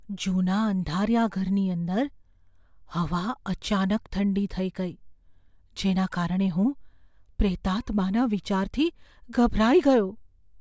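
Nothing in this recording points to a technical fault.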